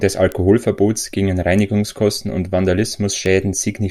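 A speech clip with two sharp, broadband ticks at 0.32 s and 3.26 s, each peaking at about -10 dBFS. These are bit error spikes: a flipped bit briefly throws three samples off by a power of two.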